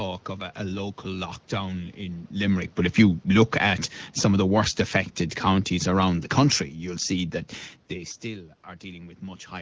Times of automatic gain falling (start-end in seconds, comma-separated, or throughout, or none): 2.41-4.92